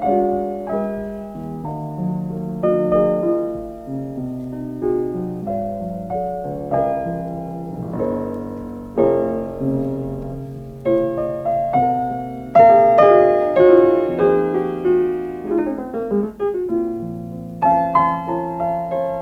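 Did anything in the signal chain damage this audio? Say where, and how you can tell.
No, nothing audible points to damage at any stage of the chain.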